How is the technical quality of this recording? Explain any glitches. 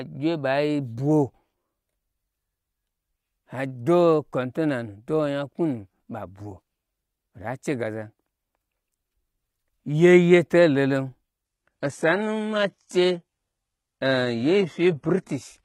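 The recording has one glitch: an adaptive stream at a lower bitrate, from 11.45 s to the end. The change is abrupt, with no gap in the speech. Nothing remains above about 11.8 kHz. The treble that remains sounds thin and synthetic, and codec artefacts rise. The player likely dropped to a lower-bitrate version when the connection slowed. The sound points to a shift from a full-rate AAC stream to a very low-rate HE-AAC one, which rebuilds the highs from a sketch.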